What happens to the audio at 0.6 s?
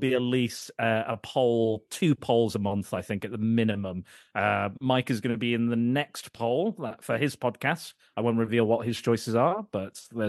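Nothing goes wrong at 0.6 s; the audio passes through that moment intact, with no dropout, click or other fault.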